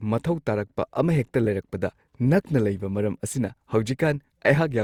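Throughout the speech there is generation loss: a swirly, hollow smear with softened consonant attacks, likely from roughly four passes through a lossy codec, consistent with Opus near 64 kbit/s. A spectrogram shows blurred onsets, with nothing above 20.3 kHz.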